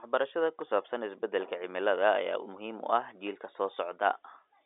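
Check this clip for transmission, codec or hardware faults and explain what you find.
One hardware fault stands out in the speech, heard through a telephone-band path with nothing above about 3.8 kHz. A phantom power thump sits at 0.59 to 0.78 s: switching a supply on or off on a live input sends a voltage step through the coupling capacitors, producing a deep low-frequency thud that dies away within about 43 ms. Unlike a breath pop or handling bump, it has no ties to the talking and no rubbing texture.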